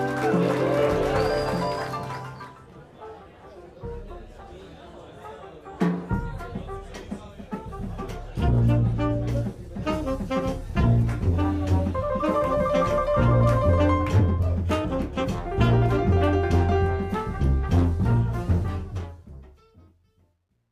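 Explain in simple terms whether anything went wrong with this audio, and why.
Something does go wrong, right at the end. The clip fades out, and from 18.62 s to 20.7 s that fade carries truncation distortion. The volume stage doing the fade keeps too few steps of loudness, which fits a 12-bit stage, and adds no masking noise. As the sound gets very quiet, it gets forced into coarse blocky steps. From 19.76 s to the end at 20.72 s it turns gritty.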